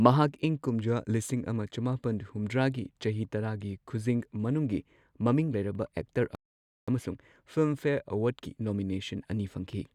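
At 6.35 s the speech cuts to silence mid-flow and stays silent for about 0.53 s, resuming at 6.88 s. This playback stall likely comes from the player running short of data or having its output thread blocked, leaving nothing to play until it recovered.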